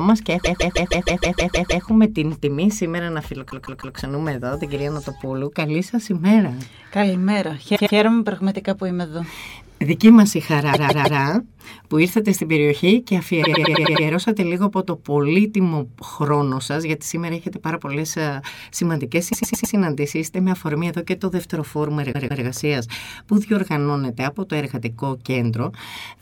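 Repeated frames turn up seven times: 0.43 to 1.84 s, 3.49 to 3.96 s, 7.75 to 7.96 s, 10.73 to 11.20 s, 13.42 to 14.04 s, 19.32 to 19.74 s and 22.11 to 22.43 s. A short block of compressed audio, either 157 ms or 105 ms, got played over and over, so you hear a stuttering loop. The worst spot, at the start, loops nine extra times and adds about 1.4 s.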